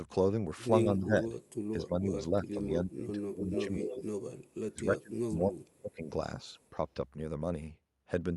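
It's a speech clip. The talker ducks by up to about 30 dB across 0.84–1.34, 1.74–4.19 and 4.71–6.15 s, likely speech suppressed in double talk, with the canceller clamping down while both sides spoke. There's also echo leak at 1.44, 3.43–3.63, 3.79–4.03 and 4.47 s, a copy arriving about 260–290 ms late, faint except around 3.4–4.0 s, where it's only about 5 dB under the voice. That's likely a loudspeaker echo the canceller didn't fully remove.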